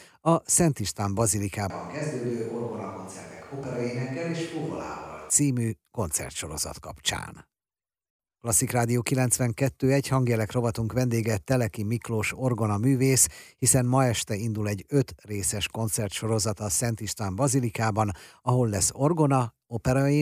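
Speech, where from 1.70 to 5.30 s, ending just before "koncertsorozat kapcsán", the sound abruptly turns hollow and roomy, about 5 dB quieter, with room noise roughly 25 dB below the speech, likely a switch to a distant microphone. The waveform steps down; the spectrogram loses low end and shows a raised noise floor.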